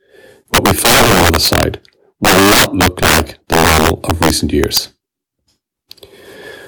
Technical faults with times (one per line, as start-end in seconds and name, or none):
0.00-6.68 integer overflow